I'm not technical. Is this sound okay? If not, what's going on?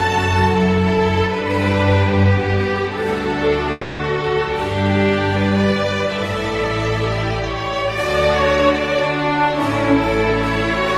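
No. From 3.71 to 4.01 s the sound briefly smears into a fading buzz, then resumes with about 0.3 s missing, likely a long network dropout.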